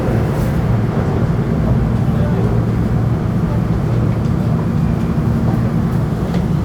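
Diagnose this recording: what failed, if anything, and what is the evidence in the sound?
Nothing in the audio stood out as a failure on listening, at any stage of the chain.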